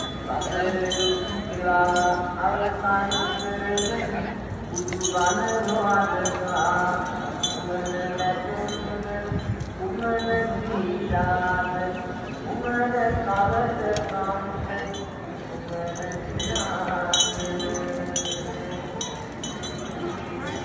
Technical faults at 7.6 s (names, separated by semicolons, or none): none